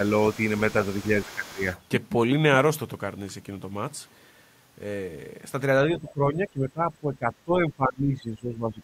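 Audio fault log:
0.32–0.36 s, 0.55–1.49 s and 1.71–1.81 s: other side's voice leaking through. A faint second talker sits under the main speech, around 25 dB down in the first two stretches and nearer 35 dB down in the last. This is likely loudspeaker echo that the canceller failed to remove. On a spectrogram, weak, separate harmonic traces overlap the main voice's; the waveform barely changes.
1.16–1.66 s and 5.87–8.82 s: speech suppressed in double talk. The talker's level sags by up to around 15 dB, in patches adding up to roughly 0.4 s in the first span and about 3 s across the second. Both sides are talking at once, and the echo canceller likely attenuated everything. The waveform shows the envelope pinched down in chunks. The spectrogram shows the voice dimming in those patches.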